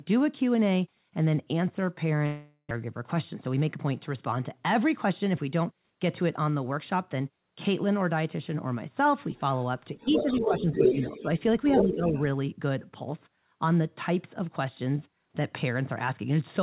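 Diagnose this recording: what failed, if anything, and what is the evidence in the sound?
Long network dropout, 2.26 to 2.78 s, at the network stage. The last sound is stretched into a decaying buzz for about 0.45 s, followed by a brief silence of about 30 ms. Speech then resumes with about 400 ms missing. The likely cause is a run of packets that never arrived, with the receiver's loss concealment extrapolating from the final good frame before giving up. The band stays capped at 4 kHz throughout, as expected from the G.711 mu-law path.

Jitter buffer speed-up, 3.35 to 3.77 s, at the receive buffer stage. Here the speech runs at about 109% of normal pace without any rise in pitch, so it sounds briefly hurried. About 50 ms in total was cut out as a series of short, pitch-period-sized pieces. This is how the buffer works off excess delay that built up, consistent with the delay shift that follows the dropout just before.

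Other side's voice leaking through, 9.97 to 11.23 s and 11.74 to 11.96 s, in call processing. A second talker is audible underneath, at about the same level as the main talker, for a sustained stretch and then a short scrap. The likely cause is the far end's loudspeaker playback reaching this microphone and the echo canceller failing to subtract it, so the return path carries it back into the call.

Speech suppressed in double talk, 10.11 to 11.25 s and 11.77 to 12.15 s, in call processing. While the leaked voice overlaps, the main talker dips by about 10 dB, affecting roughly 0.7 s of the first stretch. In the second stretch it dips by about 15 dB over roughly 0.3 s. This is likely the echo suppressor being unable to tell near-end speech from echo during double talk and attenuating everything at once.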